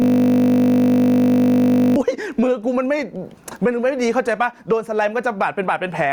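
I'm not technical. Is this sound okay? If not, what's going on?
No. From the very start until about 1.96 s, the clip has a system hang loop. The computer stalled while the sound hardware kept replaying the same tiny 20 ms slice of audio, nearly a hundred times over. Because that slice is so short, it repeats 50 times a second, and instead of a stutter you hear a steady, flat buzz. The loop is already running when the clip begins, and speech resumes only after it stops.

Throughout the whole clip there is also gain pumping. Loud and quiet moments end up squeezed to a similar level, which gives a flattened, squashed quality. The likely cause is the recording level being set far too high, with an automatic limiter pulling it down hard on every loud sound.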